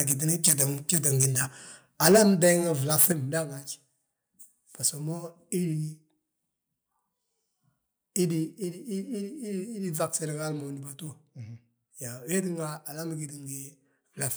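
The microphone input in this speech clip was likely set too high, so the loudest peaks hit the converter's ceiling. That microphone overload flattens their tops, adding a harsh crackle to the bursts at 0.00–0.12, 0.44–0.63, 0.89–1.26, 2.03–2.51 and 2.91–3.06 s, which run about 6 to 10 dB over. Up to roughly one sample in twenty is clipped. The call software then likely stepped the microphone volume down, once at 2.12 s by about 2 dB and again at 3.12 s by about 6 dB. Each time the level drops abruptly.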